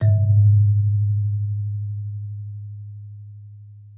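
No technical faults can be heard anywhere in the signal; its level, continuity and frequency content stay steady and intact throughout.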